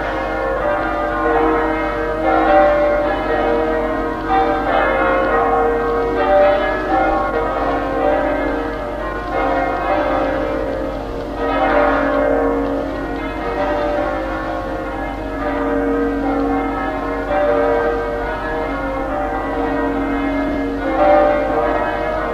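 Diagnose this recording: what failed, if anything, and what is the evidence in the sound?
Frames out of order, a network-stage fault in which audio frames arrived in the wrong sequence and the decoder played them as received. At 0.56–0.61 s, 17.80–17.87 s and 20.48–20.56 s, a brief garbled flutter interrupts the sound. Each stretch is two neighbouring runs swapped, 20 ms each in the first and 30 ms each in the other two. Unlike packet loss, nothing goes missing and no gap or concealment smear appears, and the timing afterward stays intact.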